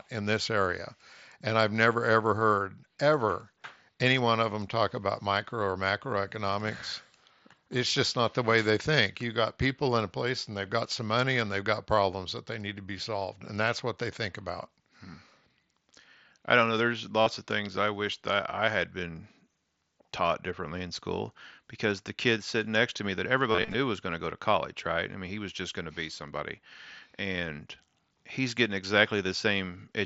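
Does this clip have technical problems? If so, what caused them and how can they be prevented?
Yes. Concealed Bluetooth headset packet loss occurs at 17.21 to 17.26 s and again from 23.52 to 23.74 s, where scattered losses, the longest run 30 ms, repeat the last waveform stretch as a buzzy held tone rather than silent gaps. Keeping the headset close to the phone, away from Wi-Fi and body obstruction, prevents it.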